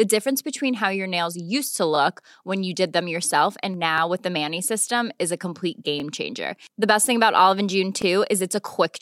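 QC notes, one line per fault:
1.96–1.98, 3.98–4.00, 6.00–6.02 and 8.02–8.04 s, overlapping chunks: the audio arrives in 2-second blocks, and each new block starts 20 ms before the previous one finished, so that sliver of speech plays twice at every join. Because the doubled bit is so short, it comes across as a small click or hiccup rather than an audible repeat, and the steady 2 s spacing gives it that regular, mechanical stutter.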